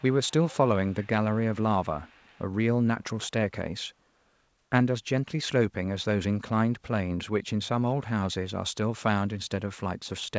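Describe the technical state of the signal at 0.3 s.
At 0.3 s you're inside a short echo leak running from the start of the clip to about 0.56 s. There's a faint delayed copy of the speech trailing roughly 380 ms behind, sitting well below the main voice, around 25 dB down. The likely cause is a far end on speakerphone whose echo canceller didn't fully scrub what its mic picked up, so a bit of the audio came back down the line.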